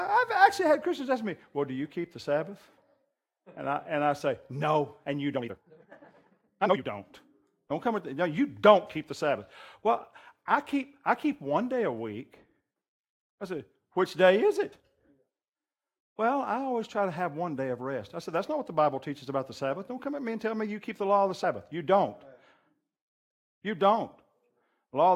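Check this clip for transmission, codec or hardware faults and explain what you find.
Three faults turn up in the speech: one time-stretched section and two spots where compressed frames were skipped.

From 5.33 to 6.83 s there is a time-stretched section. Software likely squeezed this stretch to fit a shorter length, playing it at twice normal speed while holding pitch by dropping short pieces. The speech sounds rushed there, with the pitch unchanged.

At 14.72 s and again at 21.43 s, compressed frames were skipped. At each point a couple of frames went missing or were rejected by the decoder, so playback jumps ahead by around 50 ms.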